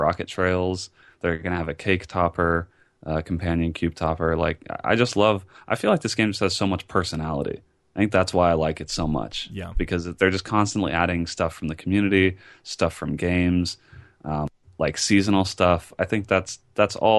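Listening through the recording, nothing stood out as a technical fault at any point.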